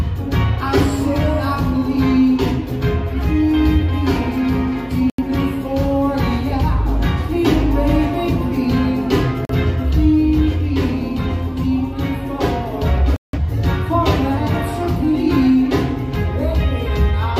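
At 5.10 s the audio mutes until 5.21 s, then drops out again from 9.45 to 9.54 s and from 13.16 to 13.38 s. These are digital broadcast dropouts: the receiver failed to decode incoming frames and muted until valid ones arrived. The gaps are 85, 43 and 171 ms long, which fits the loss of two, one and four frames of roughly 43 ms each. Whatever was transmitted inside each hole is simply gone.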